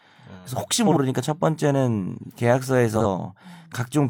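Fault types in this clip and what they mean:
Frames out of order: at 0.86–0.97 s and 2.95–3.06 s, two adjacent 43 ms blocks play swapped, heard as a garbled flutter.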